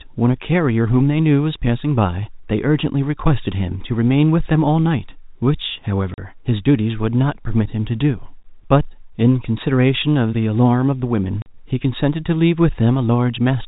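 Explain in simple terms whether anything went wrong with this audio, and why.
Packet loss filled with silence at 6.14 and 11.42 s: two brief 40 ms holes, likely two lost 20 ms packets each, replaced by silence with hard edges.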